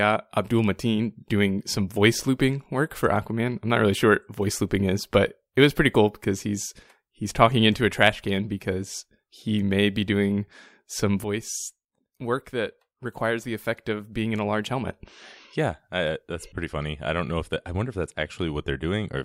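At 11.24 s the level drops abruptly by about 9 dB and stays there to the end of the clip: a sudden gain jump. Speech and background noise fall together in a single step, most likely a gain change applied between adjacent samples without a ramp.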